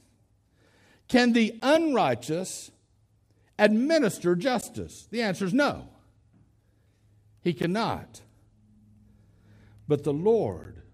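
At 1.60 s the speech drops out for about 13 ms, and the same hard-edged hole comes back at 4.61, 7.62 and 10.64 s. That's a gap between chunks: the audio was handled in 3-second pieces, and each join got a sliver of silence, probably from padding or a late start on the next piece. Nothing's actually missing; the flow just stutters with a tiny, clean-cut dropout every three seconds.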